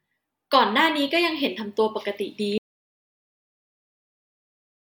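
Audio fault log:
2.58 s to end, audio dropout to silence: the speech cuts off abruptly in mid-flow at 2.58 s and never returns, leaving the final 2.3 seconds as total silence with no room tone left. This points to the input being lost, likely through a disconnected device, dropped link or stray mute, while recording continued writing silence. On a waveform the trace collapses to a flat line; a spectrogram shows the energy ending in a clean vertical edge, then darkness.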